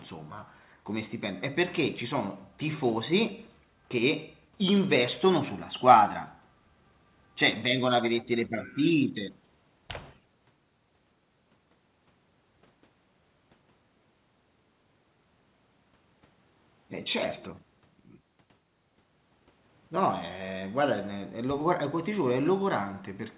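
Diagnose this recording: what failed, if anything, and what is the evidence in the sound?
Nothing stood out on listening to this speech recording, beyond the narrow telephone bandwidth of the call path, with nothing above 4 kHz, which fits a G.711 mu-law link.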